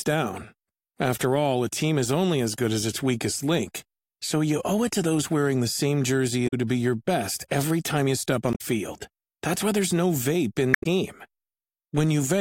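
Three stretches of the compressed speech stream carry damaged data in a compressed stream. The decoder hits corrupted frames, loses sync and skips ahead to the next valid header, so each spot comes out as a short chirp, squawk, click or hole. The first is from 6.44 to 6.54 s, between "same jersey" and "to be your best". The next is from 8.50 to 8.61 s, after "every time you step". The last is from 10.71 to 10.86 s, after "why there's no vape".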